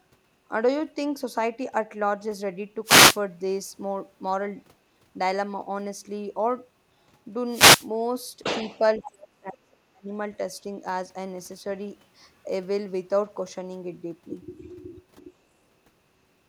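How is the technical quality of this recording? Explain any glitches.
The recording has three clear glitches: two bursts of radio-link noise and one stretch where the speech is pushed down.

From 2.84 to 3.18 s and again from 7.48 to 7.89 s, there are wireless microphone noise hits. Each is a brief swish of static. The FM radio path from the microphone faded as reflected signals cancelled the direct one, so the receiver's own hiss rose and briefly covered the speech. What sets these apart from digital dropouts is the noisy, rushing character: the static fills the gap instead of leaving silence, and both hits last only a third to two-fifths of a second.

Between 8.99 and 10.11 s, the speech is suppressed in double talk. The voice sinks by roughly 35 dB, at its deepest, for about a second in total. The likely cause is that both sides were talking at once, so the echo canceller mistook this talker for loudspeaker echo and turned it down. 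It differs from a radio fade because there is no added hiss. The speech simply ducks.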